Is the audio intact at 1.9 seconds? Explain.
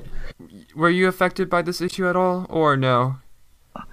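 No. Frames out of order occur from 1.88 to 1.95 s. Two adjacent frames, each about 26 ms long, were decoded in swapped order, so this brief stretch plays with its halves exchanged, giving a garbled flutter. No time is lost.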